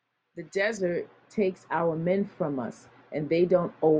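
Speech here, and from about 0.77 s right through to the end it goes noticeably dull and muffled, like someone threw a blanket over it. That's de-emphasis applied wrongly: a treble-cut filter meant to undo pre-emphasis got applied to audio that never had any, or got applied a second time. The top end rolls off smoothly, landing about 11 dB down at 10 kHz relative to 1 kHz, which is what kills the crispness.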